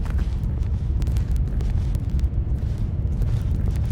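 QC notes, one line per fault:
0.14–3.92 s, word clock ticks: the receiving device runs on its own clock, off from the sender's by roughly 400 parts per million, so each slip drops or repeats one sample, giving around seventy ticks at a steady rate of about one every 50 ms.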